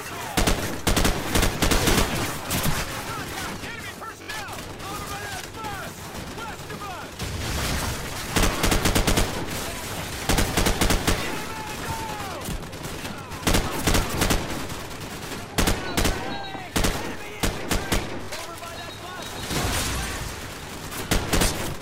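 Bluetooth stutter hits at 4.22 to 4.30 s and again at 18.24 to 18.30 s. Late or dropped wireless packets left the receiver looping its last short slice, giving a brief buzzing repeat. The audio then resumes further along, skipping about 64 ms and 43 ms.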